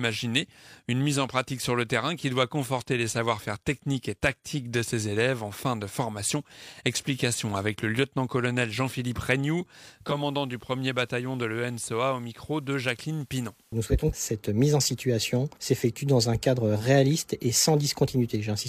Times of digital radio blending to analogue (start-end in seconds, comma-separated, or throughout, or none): 9.85-14.24